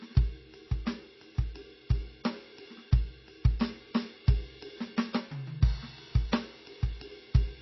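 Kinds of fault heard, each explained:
MP3 compression: likely a low-bitrate MP3 encode, around 24 kbps, forced to cut treble and drop weak frequency lines frame by frame. The music has nothing above 5.8 kHz and carries plainly audible watery, swirling artefacts, with smeared attacks throughout.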